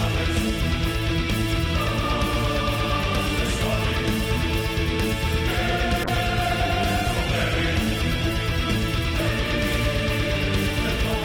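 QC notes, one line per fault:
6.04–8.85 s, call bitrate drop: the encoding turns coarse and watery for about 2.8 s, with the worst stretch lasting about 2.7 s. That fits the call's bandwidth estimate collapsing and the encoder being pushed from around 128 kbps to roughly 19 kbps, too few bits to keep fine detail or the top of the spectrum. On a spectrogram the upper band cuts off abruptly at 6.04 s and the remaining energy looks smeared and blocky, returning to full width after 8.85 s.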